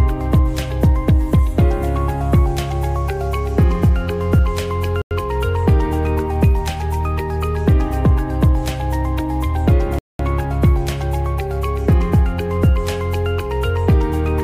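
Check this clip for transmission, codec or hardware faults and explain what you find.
Two short dropouts show up, and both look like a Bluetooth stall. At 5.02 s the sound cuts to dead silence for about 93 ms, and at 9.99 s it goes out again for about 208 ms, coming back at 10.20 s. Each time it just resumes. The likely cause is radio interference holding packets up, so the headphones' small buffer ran dry and playback paused until the resent data arrived.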